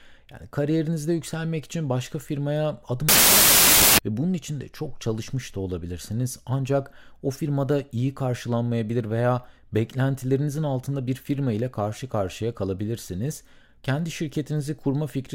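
From 3.09 to 3.99 s, about 0.9 s of the speech turns into a wrong sample width fault. Audio written as 16-bit integers is read as packed 24-bit integers. Each new sample joins bytes from neighbouring real samples. Only some values keep the true upper bits. The result is harsh, loud noise with the speech buried inside. Three bytes are taken per sample instead of two. So the buried speech runs 1.5 times fast and sounds raised in pitch.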